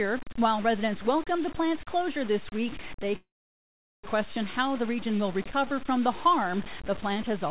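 It's a speech clip, and the whole thing carries a gritty, grainy distortion that rides along with the speech and gets worse in the quiet bits, with soft tails sputtering between steps. That's likely low bit depth without dither, sounding like about 5 bits truncated, with error only around 15 dB under the signal. Then right after "closure this week they", at 3.16 s, there's a call audio freeze: a brief buzz fades into roughly 0.77 s of silence before the speech picks up again at about 4.06 s. It likely comes from packets stalling and the jitter buffer running dry, so nothing's lost but everything after lands about 0.88 s late. The call path's narrowband coding is audible too, with nothing above 4 kHz.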